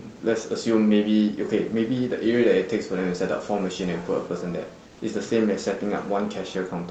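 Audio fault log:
4.87–4.99 s, comfort noise in place of the background: for 120 ms the room noise turns flat, featureless and about 2 dB quieter, likely from discontinuous transmission.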